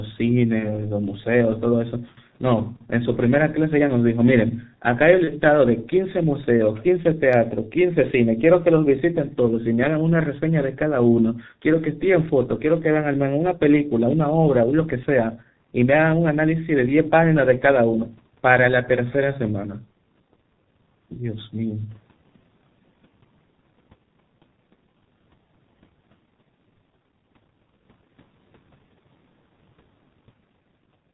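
Throughout the clip, the speech carries the sound of the G.723.1 codec, and the damage is heavy. The muffled, hoarse quality and smeared consonants fit a rate of roughly 6 kbit/s. Nothing is heard above 4 kHz. What separates this from a plain low-pass filter is the hoarse roughness: the codec models speech in 30 ms blocks and updates that model slowly, so fast changes in the voice are blurred.

From 0.59 to 0.78 s there is VoIP packet loss concealed by the speech codec. About 30 ms of audio went missing, and the decoder filled the gap by repeating its last pitch and filter settings with falling gain. The result is a brief stretched sound that fades, not a silent dropout or a click. The disturbance lasts well beyond the lost 30 ms because each rebuilt frame feeds the next.

The same packet loss concealment happens again from 5.24 to 5.33 s, with another 30 ms lost. The sound smears into a short fading stretch, and the speech stays weak and distorted for a moment after the audio returns.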